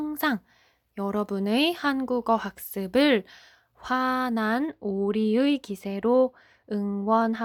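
Speech, and it's clean-sounding up to about 4.70 s. From there to the end at about 7.45 s it goes dull and muffled, which is de-emphasis applied wrongly. A treble-cut filter meant to undo pre-emphasis has landed on audio that either never had that boost or had already been corrected once. The top end slopes off smoothly, about 8 dB down at 10 kHz relative to 1 kHz.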